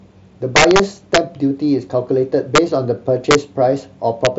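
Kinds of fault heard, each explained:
Integer overflow: loud peaks wrap to the opposite sign instead of limiting, giving harsh cracks through the speech, worst around 0.56 to 0.79 s, pushed about 3 dB over.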